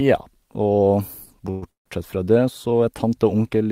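Packets were likely delayed in transit, draining the jitter buffer twice, producing a call audio freeze at 1.50 to 1.64 s and again at 1.70 to 1.88 s. The first stretches the last sound into a brief fading buzz; the second fades quickly to about 130 ms of silence. Speech then resumes where it stopped, nothing lost, but pushed back 116 ms and then 154 ms.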